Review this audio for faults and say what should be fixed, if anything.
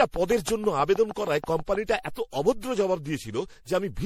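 Generation loss runs through the whole speech clip. The sound is swirly and hollow, and consonant attacks are smeared. Nothing is present above 16.9 kHz. The damage is heavier than one MP3 pass would leave. It fits a file that was likely decoded and re-encoded to MP3 around seven times, at something like 64 kbit/s. Each pass quantises on a fresh frame grid. Noise and spectral holes pile up. To prevent it, keep a lossless master and encode to MP3 only once, at the final step.

A train of clicks runs from 0.01 s to 2.09 s. There are about fifteen of them, evenly spaced at 6.3 per second. Each has much the same shape. They tick over the speech and through the pauses. They peak roughly 10 dB above the signal. This points to regular pulses from likely electrical interference or a faulty connection or power supply. To prevent it, move nearby equipment away, check cables and grounding, and confirm the interface runs without dropouts before recording.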